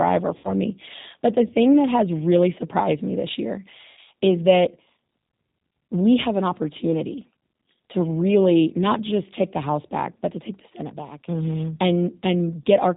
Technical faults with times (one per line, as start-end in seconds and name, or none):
0.00-12.97 G.729 codec
0.38-0.54 VoIP packet loss concealed by the speech codec
3.91-3.98 VoIP packet loss concealed by the speech codec